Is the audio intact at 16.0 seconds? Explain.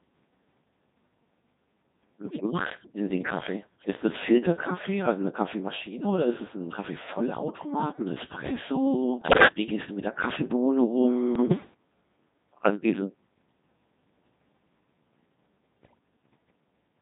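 No. Bit errors on the digital voice radio link corrupt 15.82 to 15.99 s, ending right at 16.0 s. Around one bit in ten flipped, and each corrupted vocoder parameter spoils a whole frame, so the audio jumps in pitch and level into warbling bleeps. A spectrogram shows abrupt harmonic jumps and blocky energy steps.

Throughout, the Codec 2 vocoder at 2.4 kbit/s heavily damages the audio. It rebuilds the sound from sine waves using only pitch, voicing, energy and envelope, so it sounds robotic and buzzy. A spectrogram shows smeared, evenly spaced synthetic harmonics, and the waveform shape does not match the original.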